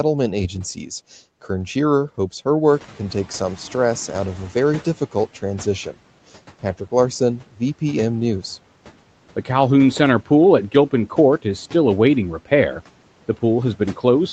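Just after "hopes her", at 2.68 s, the noise suppressor is caught catching up after the room noise jumps by about 14 dB at roughly 2.5 s. Its noise estimate still reflects the quieter floor, so the louder noise passes through with little reduction. Over the next 2.6 s, until 5.28 s, the estimate adapts and the noise sinks by about 10 dB, giving an audible fade-down of the background beneath the speech.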